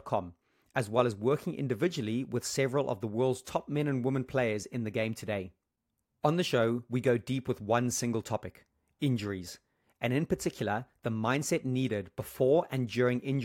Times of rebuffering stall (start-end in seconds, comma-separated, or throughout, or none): none